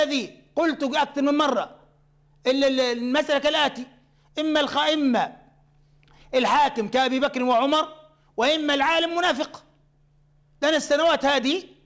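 Nothing stood out on listening; the sound comes through a call path whose band stops at about 8 kHz, and no fault could be heard.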